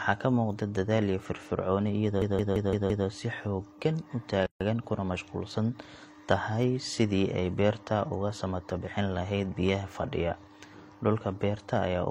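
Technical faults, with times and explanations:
2.22–3.07 s, system hang loop: the system or audio driver stalled while the sound hardware kept replaying its ring buffer, so one slice of speech about 171 ms long, which fits an 8192-sample buffer, repeats exactly five times, giving a machine-gun stutter at about 5.9 Hz.
4.46–4.61 s, gap at a join of encoded pieces: two separately encoded pieces were spliced without trimming the encoder's start delay and end padding, so a gap of about 144 ms cuts into the speech, its edges smeared by the codec so the silent part is shorter, before the sound resumes where it stopped.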